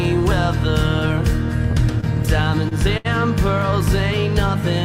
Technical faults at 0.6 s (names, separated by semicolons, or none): none